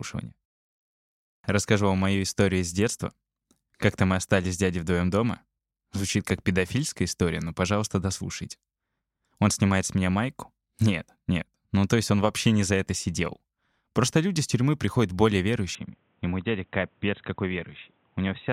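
Speech clip. After "с тюрьмы приходят более", at 15.75 s, the sound suddenly turns dull, cuts off above 3.9 kHz and drops slightly in level, with no gap. This is likely an input switched to a poorer device.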